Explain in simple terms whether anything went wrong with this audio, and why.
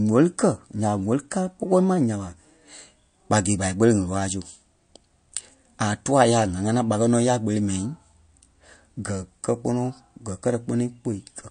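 The whole clip sounds dull and watery, with nothing above about 9.5 kHz. That's most likely MP3 compression squeezed hard, cutting treble and dropping quiet detail.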